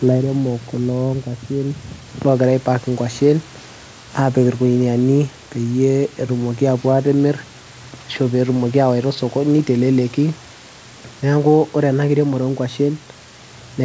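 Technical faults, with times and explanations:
No technical faults are heard anywhere in this recording.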